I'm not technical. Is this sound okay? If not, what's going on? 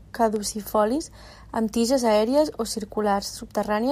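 No. There are CD scratch ticks near the start. Between 0.36 and 0.68 seconds you can hear three small clicks in the speech. Each one is very short, about a millisecond at most. They come from a scratch or mark on the disc. The player could not read that spot, so it guessed the missing sound or briefly silenced it. The scratch passes under the laser once per turn of the disc, which is why the ticks repeat.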